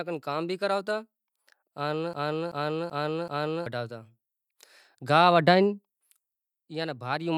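Speech with a broken-record loop from 2.13 s to 3.66 s. A fragment of about 0.38 s plays, then repeats exactly, back to back, four times in all. The speech that belonged in that stretch of roughly 1.5 s never arrives; the clip resumes afterwards with it missing. The likely cause is a player, encoder or stream that stalled and kept sending the last piece of audio it held.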